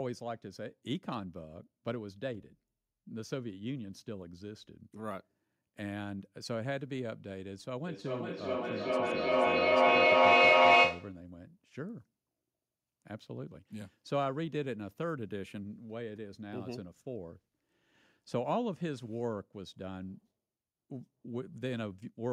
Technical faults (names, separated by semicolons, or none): feedback echo between two devices